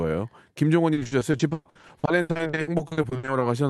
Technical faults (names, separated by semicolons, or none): repeated packet loss (robotic sound)